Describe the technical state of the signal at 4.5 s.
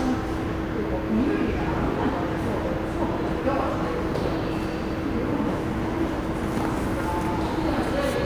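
At 4.5 s, as across the whole clip, a faint gritty, inharmonic fizz rides on the louder and brighter parts of the sound, roughly 35 dB below it. This comes from crude rate conversion: linear interpolation without filtering, which fits a 32 kHz to 44.1 kHz change.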